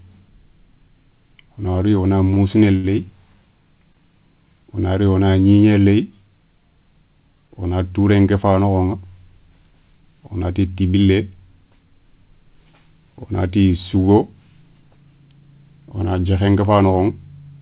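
Short stalls from a late packet occur at 2.34 to 2.38 s, 2.76 to 2.86 s and 3.93 s. Each time the next packet missed its slot, the jitter buffer ran dry, and the receiver held the last sound for 20 ms, 74 ms and 18 ms until the packet arrived. Nothing is lost, but playback slips later by that amount. The 74 ms hold is the longest, a drawn-out sound with a slight buzz or dip, heard over the narrowband call sound cut off above 4 kHz.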